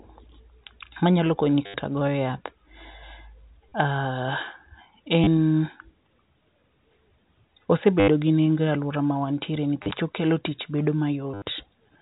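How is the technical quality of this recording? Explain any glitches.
The speech is telephone-band audio carried as G.711, so nothing above 4 kHz is present, and six short glitches interrupt it.

Packet loss with last packet repeated occurs at 1.66–1.74 s (after "manyalo konyi"), 3.69–3.72 s, 5.24–5.27 s, 8.0–8.08 s (before "gi nengo e aluora"), 9.83–9.91 s (after "nengo e aluora mawantiere", where the losses are scattered over 80 ms), and 11.34–11.42 s. Missing audio is filled by replaying the previous chunk, which fits 10 ms packets. The replays buzz near 100 Hz, giving a robotic stutter rather than a silent gap. The 80 ms runs stutter longest.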